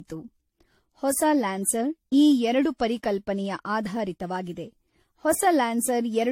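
Across the whole speech clip the sound is swirly and hollow, with consonant attacks smeared and a watery shimmer that is heavier than a single moderate-rate encode would leave. Nothing is present above 16.5 kHz. This is likely generation loss: the audio seems to have been decoded and re-encoded around seven times, which fits repeated AAC-LC passes near 64 kbit/s, each re-quantising on a shifted frame grid so the noise and spectral gaps stack up.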